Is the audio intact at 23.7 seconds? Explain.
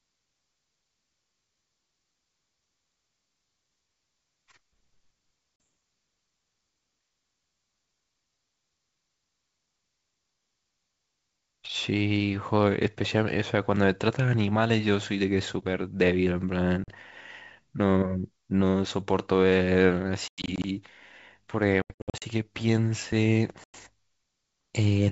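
No. From 23.64 to 23.75 s there is packet loss on an ADPCM call: around five packets, about 100 ms, drop to hard-edged silence. Unlike a simple PCM dropout, the G.722 decoder's predictor and step size lose sync, so speech resumes slightly distorted before settling.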